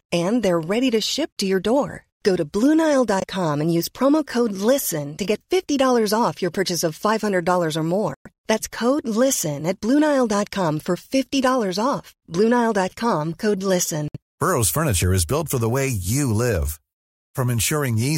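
It's a speech clip with four short dropouts where the sound cuts to silence, then carries on: 1.33 s after "ready to ship" (41 ms), 3.20 s before "and use promo code" (18 ms), 8.14 s (112 ms) and 14.08 s (64 ms). It's likely a Bluetooth stall, with the headphones' buffer running dry while held-up packets were resent.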